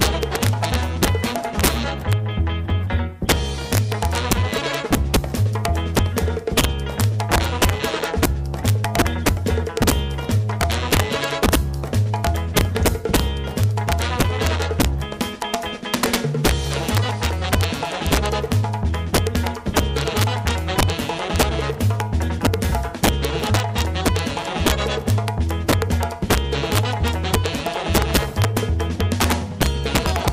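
Right through the clip there's integer overflow: the level was pushed about 3 dB past full scale, and instead of limiting, the loudest peaks, around one percent of samples, wrap to the opposite sign. You hear harsh, violent cracks on the peaks, far nastier than clipping.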